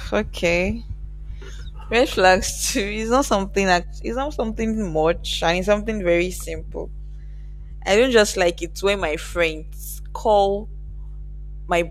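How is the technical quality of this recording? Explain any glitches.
The recording has one clear problem: mains hum running the full length of the speech. A ground loop or nearby transformer is leaking the 50 Hz power line into the signal, giving a steady low drone roughly 15 dB under the speech. A spectrogram would show a thin horizontal line at 50 Hz, with fainter low harmonics above it, and the waveform would show a regular ripple persisting through the pauses.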